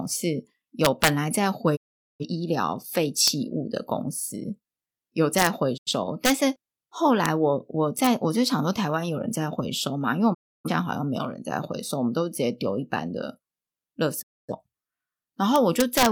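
At 0.85 to 1.08 s, integer overflow cracks violently. Loud peaks, pushed about 5 dB past the limit, wrap to the opposite sign instead of clipping. At 1.75 to 2.25 s, a digital broadcast dropout fades out within 20 ms and mutes. The receiver lost valid frames, so about 0.43 s of speech is gone. Sharp overflow cracks return at 3.28 s, 5.39 to 5.47 s, 6.25 to 6.30 s, 7.26 s and 8.05 to 8.07 s. A short dropout hole falls at 5.76 to 5.91 s. Longer dropouts mute 10.33 to 10.70 s and 14.21 to 14.54 s. A final overflow burst crackles from 15.56 to 16.06 s.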